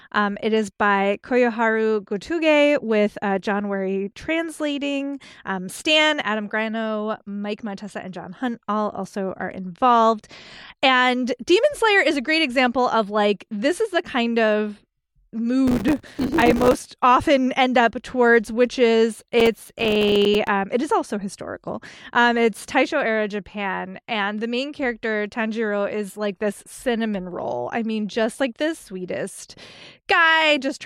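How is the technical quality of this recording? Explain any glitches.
The recording has two bursts of processor overload crackle in the speech, at 15.68–16.74 s, just before "often end up towards", and at 19.40–20.48 s, between "up towards which is" and "it is also historical". The processor repeatedly missed its buffer deadlines, and each miss dropped in a sliver of silence, a few milliseconds long. The dense hard-edged gaps give a gritty tearing over the voice, denser in the first burst. A waveform shows many tiny flat gaps, and a spectrogram shows thin vertical broadband streaks.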